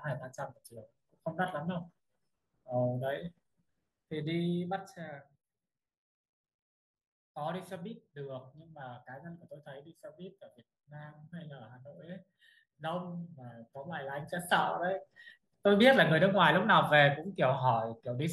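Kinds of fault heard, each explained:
No kinds of fault are heard in this speech.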